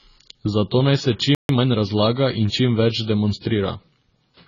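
AAC compression damage runs through the whole speech clip: the sound is dull and smeared, with fizzy, warbling sibilants. This likely comes from AAC-LC coding at a very low bitrate, consistent with about 16 kbps, which discards high frequencies and thins out the spectrum.

A playback stall cuts the sound off at 1.35 s and leaves silence until 1.49 s, a gap of about 143 ms. The audio stops mid-flow, likely because the player ran short of data and produced no output until its buffer recovered.

Time-compressed catch-up follows from 1.49 to 1.77 s. The player works off its backlog by splicing out short pieces and cross-fading the rest, so this stretch plays about 1.5 times faster at normal pitch, sounding hurried.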